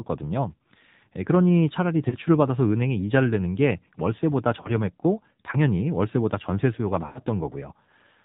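Throughout, the AMR narrowband mobile codec leaves buzzy, synthetic speech, consistent with roughly 7.4 kbps, and a spectrogram shows nothing above 4 kHz. Lost AMR speech frames cause brief warbling dips at 2.10–2.15 s and 4.62–4.71 s, each consistent with one missing frame. At 7.06–7.23 s, a longer drawn-out fade suggests about five frames lost. The waveform shows each event as a sagging envelope.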